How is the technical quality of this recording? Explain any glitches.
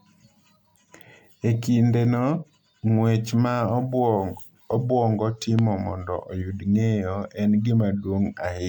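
Two problems affect the speech: repeated lossy coding across the whole clip, and a single sharp pop just past the midpoint.

Generation loss runs throughout. The audio was most likely decoded and re-encoded with MP3 around seven times, at settings that sound near 130 kbit/s. Every pass requantises on a shifted frame grid, so the errors compound instead of staying at one pass's level. The result is a swirly, hollow, smeared sound with softened consonant attacks, and nothing remains above 19.9 kHz.

A loud pop occurs from 5.59 to 5.61 s, just before "mondo oyud ng’eyo en". An abrupt voltage step or pulse, likely from a connector, switch or static discharge, entered the signal chain, and the following circuitry shaped it into a brief transient. It is heard as one sharp click-thump peaking about 10 dB above the speech, while the speech continues underneath.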